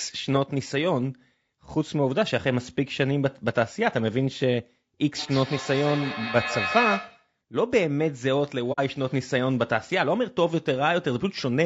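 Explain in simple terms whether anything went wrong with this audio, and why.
Yes, three things went wrong.

Throughout the recording the speech sounds rough and grainy, with a hiss filling the spaces between the tones of the voice and a top end that seems dull or slightly artificial. This is most likely low-delay AAC compression, the kind used for video calls. It chops sound into very short slices, which saves delay but handles voices poorly when data is tight. Unlike a bad microphone, the roughness follows the voice itself rather than sitting underneath it.

From 5.15 to 7.33 s there is feedback echo between two devices. Two phones or computers in the same room were probably on one call, so one played back what the other picked up, and that sound was captured again. Each bit of speech comes back roughly every 150 ms, thinner and more ringing with each return. The repeats are nearly as loud as the speech itself. 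A room echo would sound smooth and blurred instead, not like these evenly spaced copies.

At about 8.72 to 8.80 s there is AAC frame loss with muting. A small piece of data, roughly 60 ms of sound, never arrived, and the player filled the gap with silence. The sound fades out and back in gently, so you hear a brief soft hole. That gentle fade is what separates it from a hard dropout or a glitch.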